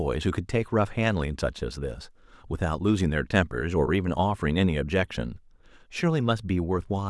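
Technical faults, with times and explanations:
No technical faults can be heard in this speech clip.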